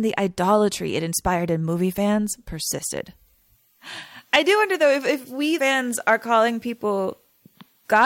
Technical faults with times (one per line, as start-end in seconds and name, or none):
5.57 compressed frames skipped